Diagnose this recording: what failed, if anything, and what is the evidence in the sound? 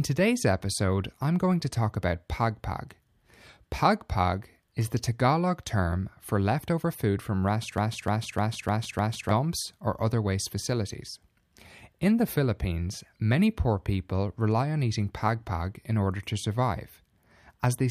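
A broken-record loop runs from 7.78 to 9.31 s. One 0.30 s fragment of speech repeats exactly five times back to back, and the speech due in that span is lost. This is likely a stalled playback or stream buffer replaying its last held fragment.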